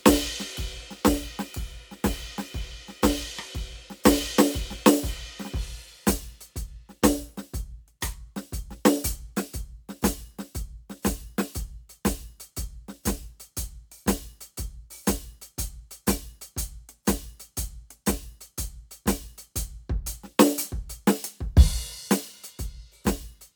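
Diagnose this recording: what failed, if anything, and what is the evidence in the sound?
Nothing stood out on listening to this music recording; no stage of the chain left an audible trace of failure.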